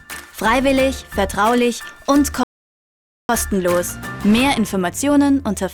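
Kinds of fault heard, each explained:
Rebuffering stall: the player used up its downloaded audio and had to halt until more data came in, so at 2.43 s the sound drops to silence for about 0.86 s, then picks up at 3.29 s exactly where it left off, adding time without losing any content.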